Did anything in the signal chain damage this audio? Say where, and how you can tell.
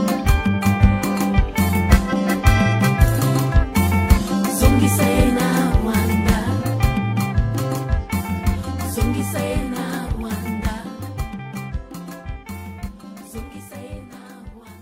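No, nothing in the signal chain damaged this audio.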